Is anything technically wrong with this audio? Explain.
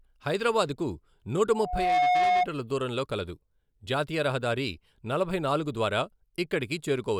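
Yes. Loudspeaker feedback squeal runs from 1.49 to 2.47 s, after "హైదరాబాద్ కు నూట": a microphone-to-speaker loop rings at 723 Hz, swelling over about half a second into a tone louder than the speech, ending before "దూరంలో కలదు జాతీయ రహదారి".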